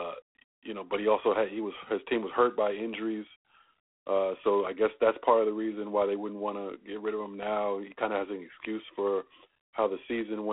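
From start to finish the speech carries a rasping, grainy hiss that rises and falls with its level. It sits inside a narrow telephone band of roughly 300 to 3400 Hz, with nothing above 3.8 kHz. This is G.726 ADPCM coding damage, and it is plainly audible. The codec sends only a few bits per sample describing how the signal differs from an adaptive prediction, and that coarseness turns into level-following noise. The degree of it fits a 24 kbit/s setting.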